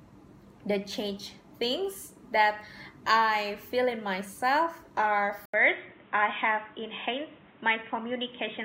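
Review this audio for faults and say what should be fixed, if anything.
At 5.46 s the audio drops out for 80 ms and returns dull and boxy until the end at 8.64 s, with nothing above 3.8 kHz and a new background noise roughly 30 dB under the signal, while loudness stays about the same. This is likely an input switched to a poorer device. A codec bandwidth drop or added low-pass filter would narrow the band without that brief gap or the fresh noise floor and changed tone. To prevent it, lock the recording input to one device and disable automatic switching to headset profiles.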